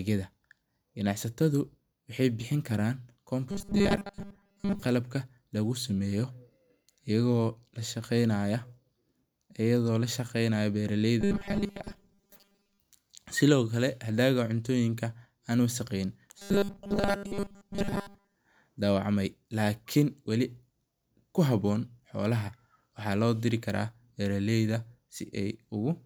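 Audio most likely arrived too slowly, so short 5 ms buffers were replayed in place of the missing audio, giving robotic sound from repeated short buffers in this speech clip. From 3.51 to 4.82 s, 11.21 to 12.80 s and 16.38 to 18.36 s, a rigid 200 Hz metallic buzz largely replaces the voice.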